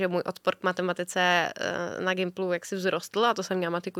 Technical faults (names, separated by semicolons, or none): none